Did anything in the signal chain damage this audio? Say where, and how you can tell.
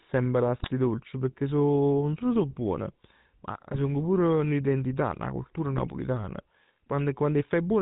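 Yes. At the codec stage, the GSM full-rate codec leaves a buzzy, gravelly roughness throughout with nothing above 4 kHz, consistent with 13 kbps pulse-excited vocal-tract coding.

In the network, GSM bit errors produce squawks and gargling at 0.58–0.70 s, 3.72–3.79 s and 5.78–5.88 s. Corrupted filter, pitch and gain values distort individual frames.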